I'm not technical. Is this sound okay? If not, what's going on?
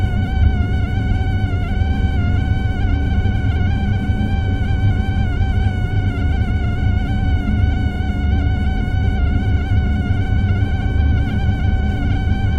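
Yes, it's fine: nothing in it sounds broken or glitchy, so you can relax about this one.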